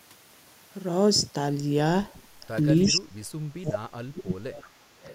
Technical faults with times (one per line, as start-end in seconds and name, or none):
2.84-2.92 echo leak
2.88-3.23 speech suppressed in double talk
3.55-4.44 speech suppressed in double talk
4.53-5.15 echo leak